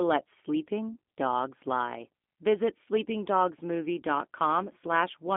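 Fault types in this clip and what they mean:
G.729 codec: the speech is rebuilt from a coarse vocal tract model, which fits an 8 kbit/s G.729A link, so it sounds plainly rough and slightly synthetic. A spectrogram shows an empty band above 3.5 kHz, little below 200 Hz, and smeared, blocky harmonics.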